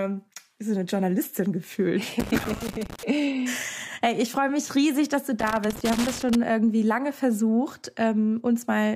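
Loose connector crackle breaks up the sound twice, from 2.20 to 3.03 s and again from 5.40 to 6.35 s, each burst lasting just under a second. In both stretches the signal is chopped into an irregular scratching crackle, the sign of a worn or dirty contact repeatedly making and losing connection as the plug or cable shifts. Each brief break and reconnection interrupts the audio, and any DC present on the line turns those transitions into pops.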